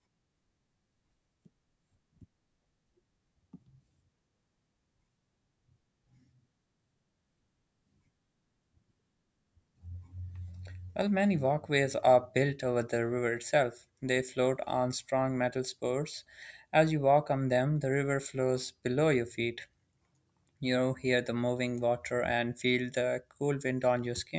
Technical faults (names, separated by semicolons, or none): none